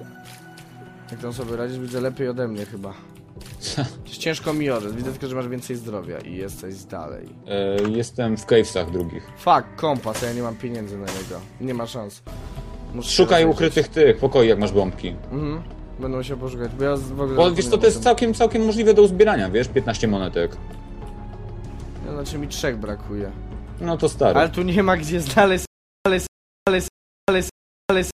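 Stutter with silent gaps from 25.65 s to the end: a 211 ms burst repeats four times, with 402 ms of silence between, likely a stalled stream replaying its last fragment.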